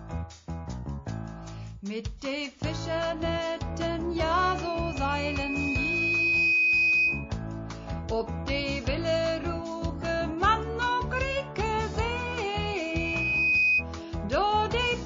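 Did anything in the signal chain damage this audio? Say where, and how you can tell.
Yes, three kinds of damage. Start at the codec: the whole clip has plainly audible MP3 compression, watery and swirly with a dulled top end and smeared attacks, and the thin, starved quality fits a low bitrate around 32 kbps, likely the cause. With so few bits the encoder drops the treble above a fixed cutoff and lets weak frequency lines flicker on and off between frames, which is where that swirl comes from.

The same codec also gives you pre-echo at 2.18 s. About 39 ms of hiss, roughly 13 dB up, creeps in ahead of a sharp attack, and the attack itself lands soft. The encoder never switched to short blocks, so its quantisation noise got spread evenly over a roughly 72 ms window. Noise sized for the loud hit therefore spilled into the quiet stretch just before it.

Upstream of all that, back at the playback and mic stage, there's loudspeaker feedback squeal twice: 4.34 to 7.36 s and 12.44 to 13.85 s. 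Both times a single 2.5 kHz tone swells up, over about two seconds the first time and about one second the second, until it's roughly 10 dB above the sound. The mic was hearing the speaker it fed, and at 2.5 kHz the loop gain went past one.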